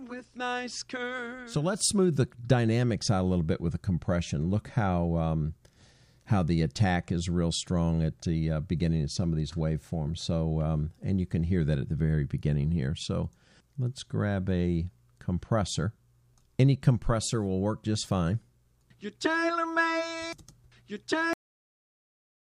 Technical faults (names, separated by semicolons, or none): cut-off end